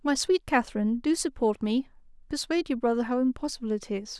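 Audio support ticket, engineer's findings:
Listened to the speech recording in full; nothing stood out, no symptom to log.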